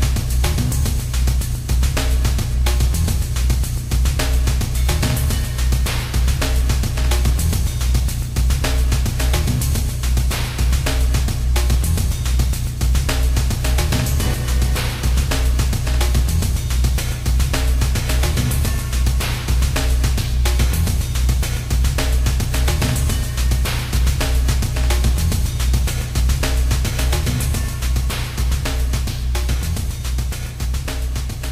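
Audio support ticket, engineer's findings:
No audible fault found anywhere in the audio. No symptom to trace to any component in the chain.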